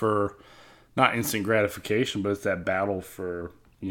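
No technical faults can be heard anywhere in the recording.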